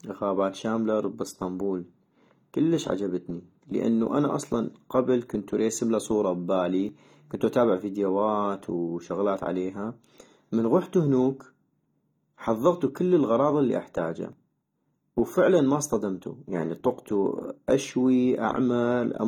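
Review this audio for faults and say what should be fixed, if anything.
The speech carries plainly audible AAC compression throughout, with a dull, smeared quality and a warbling, fizzy texture on sibilants and sustained sounds, likely from AAC-LC encoding at a low bitrate. The band extends to about 19 kHz, so the damage is not a lowered cut-off. It comes from coarse quantisation of the spectral lines, which at around 32 kbps leaves gaps and noisy fill in the upper bands. To prevent it, encode speech at a higher bitrate or keep a lossless master for review and delivery.

There are audio-missing-between-chunks faults at 6.89 s and 14.33 s. At each point the audio skips forward without any silence, with roughly 20 ms removed, which produces an abrupt jump in the speech. The pattern fits a recorder or processor that handles the signal in fixed blocks, consistent with 2.5 s chunks, and loses a short piece while closing one block and opening the next. 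That handover is likely the cause. To prevent it, buffer across block boundaries so that capture continues without interruption during each handover.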